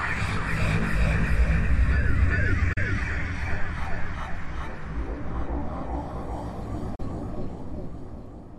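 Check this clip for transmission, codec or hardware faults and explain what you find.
Two digital broadcast dropouts interrupt this recording of sounds, at 2.73 to 2.78 s and again at 6.95 to 7.00 s. Each time the receiver lost the signal or rejected a corrupted frame and muted its output until clean data returned. The gap length fits a single lost frame of about 32 ms. The sound fades out over roughly 8 ms, drops to silence for a brief hole, then resumes. Whatever was transmitted during each hole is gone.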